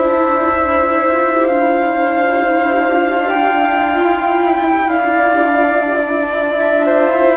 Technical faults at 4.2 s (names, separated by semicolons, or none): none